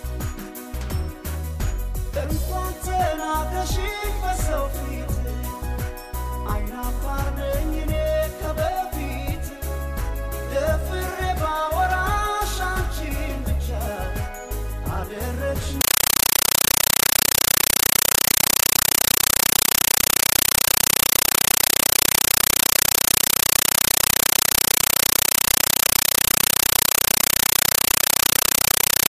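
A compressed stream played as audio takes over from 15.81 s to the end. A Dolby Digital (AC-3) stream was treated as plain samples rather than decoded, so the sound becomes chattering static: 8 ms noise bursts separated by silent padding, repeating 31.25 times a second.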